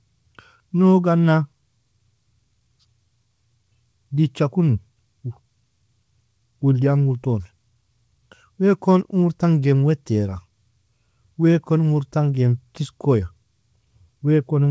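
Nothing's actually wrong with this speech recording; it just sounds like it came over a call line, with the content stopping at around 8 kHz the way a wideband codec like G.722 leaves it.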